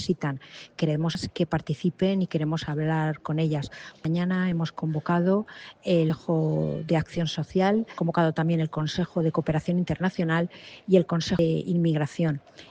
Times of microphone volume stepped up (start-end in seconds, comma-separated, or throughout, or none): none